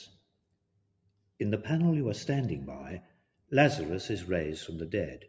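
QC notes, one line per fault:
Throughout: noise suppressor applied to music or sounds. A speech-tuned suppressor stays engaged and treats sustained tones, ambience and reverb tails as noise. Its gain keeps swinging by around 15 dB, so level pumps and flutters, and held sound thins out.
0.07 to 1.4 s and 3.02 to 3.52 s: sound cut by the noise suppressor. The suppressor misreads this material as noise and pulls it down hard, by about 19 dB and then about 18 dB. Sustained and decaying parts sink or end abruptly, across roughly a second and then half a second.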